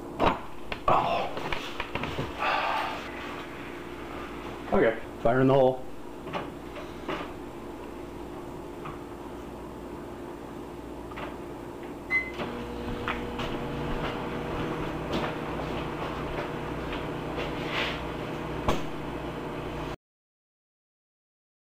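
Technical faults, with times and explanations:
19.95 to 21.73 s, cut-off end: the sound stops abruptly mid-event at 19.95 s and drops straight to digital silence with no natural decay. The final buffers were never written or played out, so the last 1.8 s holds nothing at all.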